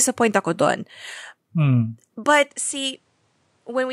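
Speech, and at 2.5 s the sound abruptly narrows, with nothing above 10.8 kHz, drops roughly 10 dB in level and gains a faint new noise floor, with no gap at the change. This points likely to the input switched to a poorer device, through to the end.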